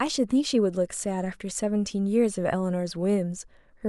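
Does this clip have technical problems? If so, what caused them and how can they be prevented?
No, nothing technical goes wrong anywhere in this speech clip, so there's no cause to track down and nothing that needs preventing.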